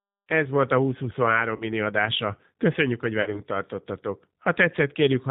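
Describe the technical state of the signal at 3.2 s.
At 3.2 s the signal is coded with G.729 throughout. Its band stops at 4 kHz, so the speech sounds dull. The rough, slightly synthetic texture is plainly audible and points to the 8 kbit/s G.729A variant, which rebuilds speech from a vocal tract filter and sparse pulses.

VoIP packet loss concealed by the speech codec starts at 3.22 s and lasts to 3.41 s. About 40 ms of audio is missing, which fits four lost 10 ms frames. The decoder repeats its last pitch and filter with falling gain, giving a buzzy tone or coloured noise that fades. The voice stays weak or distorted for tens of milliseconds or more after 3.41 s.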